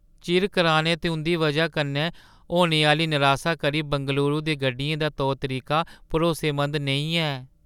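Listening closely to the speech recording, nothing stood out as a technical fault at any point.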